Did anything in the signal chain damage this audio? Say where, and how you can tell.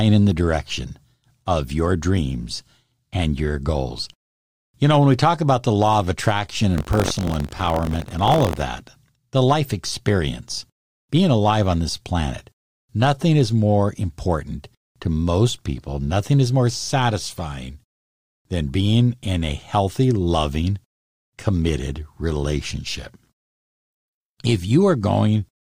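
Yes, buffer tearing at the driver or buffer stage, from 6.76 to 8.63 s after "the law of attraction". A 46.9 Hz rattle, which fits a 1024-sample buffer, rides the speech as a small slice of each period replays audio from roughly 70 ms earlier, with hard joins instead of an underrun's silent gaps.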